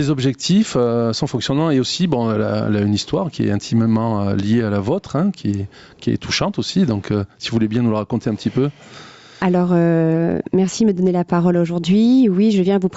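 Gain pumping runs throughout: the level is pulled down by about 10 dB on each loud sound and then recovers, squashing loud and soft parts together. This is likely caused by input gain set far too high, feeding a fast limiter or compressor. Unlike a noise gate, the ducking is triggered by loud sounds, not quiet ones. Nothing above 8 kHz is present, which is expected from the call path.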